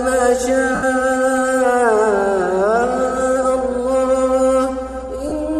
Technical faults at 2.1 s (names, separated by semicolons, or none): none